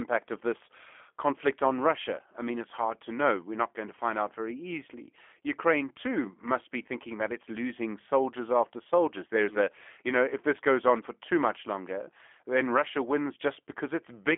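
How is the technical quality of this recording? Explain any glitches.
The technical quality is limited by one fault that runs through the whole recording: G.729 codec damage, plainly audible from start to finish.

G.729 codec, throughout: the speech is rebuilt from a vocal tract filter, a pitch predictor and a few coded pulses per frame, which fits an 8 kbit/s G.729A link. The result sounds rough, slightly synthetic and telephone-narrow. On a spectrogram, energy stops at a hard ceiling near 3.5 kHz, and the band below about 250 Hz is thin.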